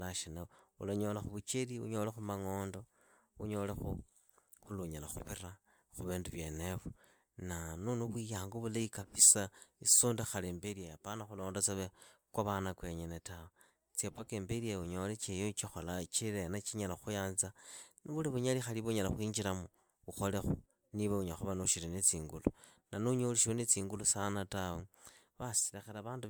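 Throughout the speech there is generation loss, likely from MP3 encoding repeated about five times at around 140 kbit/s. Unlike a single low-bitrate encode, the band still extends to 20.2 kHz, yet the sound is swirly, hollow and smeared, with blurred consonant attacks.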